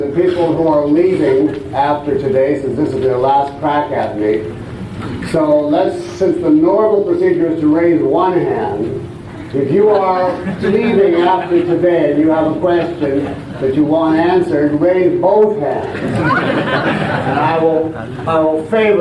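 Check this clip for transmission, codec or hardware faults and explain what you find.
No transmission, codec or hardware faults turn up anywhere in the clip. There is nothing to report for any stretch of it.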